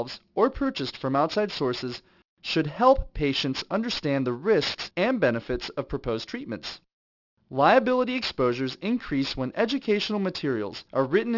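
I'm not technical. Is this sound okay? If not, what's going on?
No, not quite. All the way through, the speech has a gritty, metallic edge, most noticeable on hissy sounds like s and sh. That's aliasing. The sound was squeezed down to a lower sample rate without first removing the very high frequencies. Anything above about 6 kHz got folded back down into the audible range as harsh, unrelated tones, which fits a drop to a 12 kHz rate.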